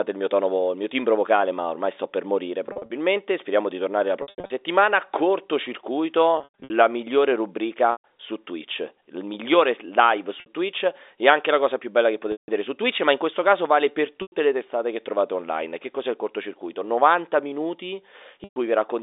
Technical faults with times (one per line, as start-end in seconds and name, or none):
2.66-2.90 packet loss with pitch repetition
4.22-4.50 packet loss with pitch repetition
6.38-6.70 packet loss with pitch repetition
7.92-8.04 packet loss with pitch repetition
10.40-10.46 packet loss with pitch repetition
12.32-12.48 packet loss with pitch repetition
14.22-14.32 packet loss with pitch repetition
18.44-18.56 packet loss with pitch repetition